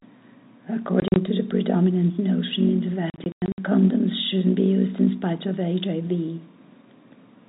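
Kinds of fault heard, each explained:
Packet loss filled with silence: chunks of the stream never arrived and the receiver just played nothing in their place, so the speech drops out in short holes with hard edges. Around 1.0 to 1.16 s about 80 ms goes missing in bits, the longest gap 40 ms. Then 3.1 to 3.58 s is worse, about 260 ms lost, one hole 100 ms long. The hole lengths fit 20 ms packets, and the narrowband telephone sound carries on around the gaps.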